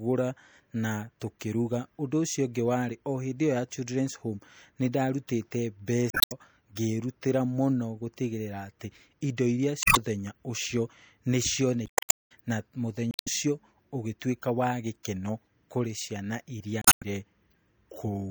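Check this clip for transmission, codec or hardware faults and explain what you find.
Two faults can be heard in this speech: codec damage throughout and five short bursts of corrupted data.

Across the whole clip the speech sounds watery and swirly, with metallic chirps on s sounds and smeared attacks. This is likely MP3 compression at a low bitrate, around 64 kbps, where the encoder cuts the treble and drops weak frequency lines that flicker from frame to frame.

Damaged data in a compressed stream produces brief garbled blips at 6.10 to 6.32 s, just after "nĩ ndarutite", at 9.81 to 9.97 s, at 11.86 to 12.16 s, just before "ciothe na", at 13.11 to 13.28 s, right after "ciothe na", and at 16.82 to 17.03 s. In each, corrupted bytes make the decoder misread frames and lose sync until it finds the next valid frame header.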